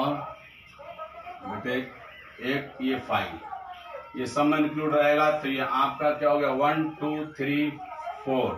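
Imaging from linear upsampling runs throughout: the rate was raised by straight-line interpolation, fitting a 16 kHz source, leaving a faint mirrored band between 8 and 16 kHz, roughly 35 dB down, as metallic shimmer.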